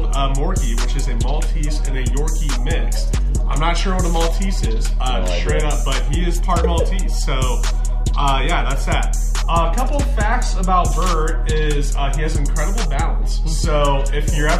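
No technical faults are audible.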